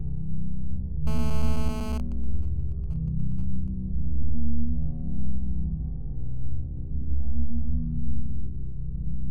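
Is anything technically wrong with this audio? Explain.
Yes, there are three kinds of fault.

GSM phone buzz, from 1.07 to 1.95 s: a 2G phone in a call nearby transmits 216.7 bursts per second, and the audio circuitry rectifies them. The result is a harsh, steady 217 Hz rasp rich in harmonics, about 18 dB below the wanted sound and unrelated to it.

GSM signalling bursts, from 1.95 to 3.68 s: the same phone is still in a call, but its talker has gone silent, so it sends only short groups of bursts. These are rectified into even ticks with a longer 217 Hz buzz twice a second, around 25 dB below the signal.

Repeated frames, at 1.47 to 1.49 s and 4.22 to 4.35 s: the decoder plays compressed material again. First a 21.3 ms slice repeats once, which fits a single frame. Later a 64 ms stretch plays twice more, adding 128 ms. Each is heard as a stutter.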